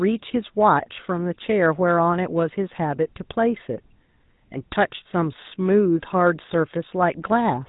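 The speech has been passed through the GSM full-rate codec for its whole length. The coder models the vocal tract and drives it with a sparse, regularly spaced pulse excitation, keeping only a fraction of the detail, at a rate consistent with the 13 kbps mode. The result is plainly audible: a buzzy, gravelly roughness sits on the voice throughout, and nothing above 4 kHz survives, so the top end sounds cut off.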